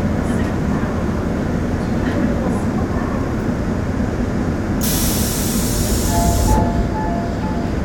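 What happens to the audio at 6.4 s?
Nothing goes wrong at 6.4 s; the sound carries on intact through that moment with no dropout, click or distortion.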